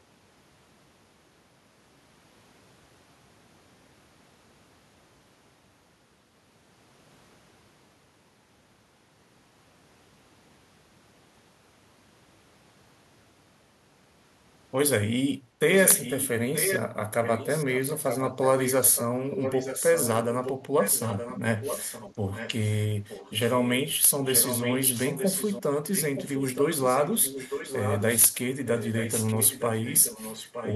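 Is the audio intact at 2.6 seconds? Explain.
Yes, at 2.6 seconds the speech plays through intact, with no dropout, click or other fault to be heard at that point.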